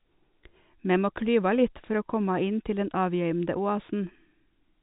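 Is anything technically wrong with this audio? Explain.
No, nothing is technically wrong: the speech carries the ordinary character of G.711 A-law telephone coding at 64 kbps, with nothing above about 3.9 kHz, as that format should sound.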